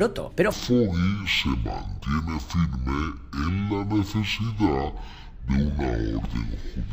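From 0.52 s to the end, the audio shows a stereo read as mono fault. Left and right samples, which alternate in the stream, are being taken in sequence as one channel, so each stereo frame becomes two consecutive mono samples. Playback therefore runs at 0.5x speed and drops a full octave, 12 semitones down, giving a slowed, lowered sound. A mirror image of the content also appears in the upper half of the spectrum.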